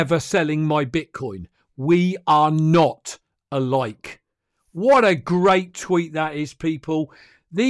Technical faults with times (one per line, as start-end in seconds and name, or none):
none